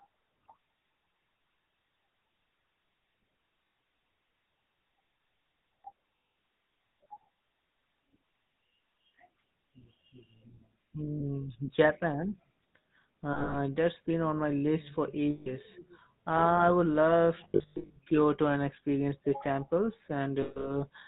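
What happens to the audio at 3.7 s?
At 3.67 s there are lost GSM frames. About 120 ms of coded audio went missing. The decoder repeats the last good frame, giving a brief rough, metallic ring. This sits on the GSM full-rate codec, which damages the whole clip audibly. Its pulse-driven vocal-tract model and 4 kHz ceiling make the speech buzzy and gravelly.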